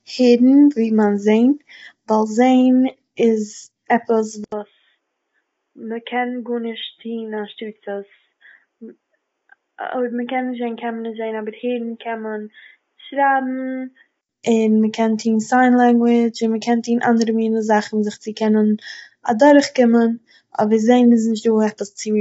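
From the start, the speech sounds rough and grainy, with noise between the harmonics and nothing above 7.8 kHz. This is likely low-delay AAC compression, fitting AAC-ELD at around 24 kbps. Unlike a simple low-pass, the damage lies inside the band itself.

At 4.44 s, after "איז עפעס", an 80 ms silence marks what is likely an input switched to a poorer device. The band narrows to below 3.8 kHz, the level drops by about 10 dB, and a faint new noise floor appears. That abrupt gap distinguishes it from gradual EQ drift. Fuller sound returns at 14.29 s, before "און מ'קען".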